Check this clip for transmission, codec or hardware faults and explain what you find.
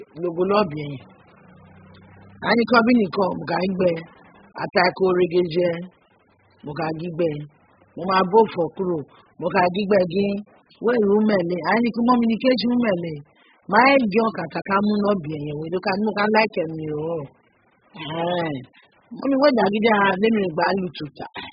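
One fault runs through the whole speech recording, likely AAC compression at heavy damage. Nothing remains above 5.1 kHz, and what is left sounds smeared and warbly, which fits AAC-LC at a very low bitrate, around 8 kbps. A simple low-pass filter would only make the sound dull. Here the codec also starves bands below the cut-off, so sibilants come out fizzy and unstable.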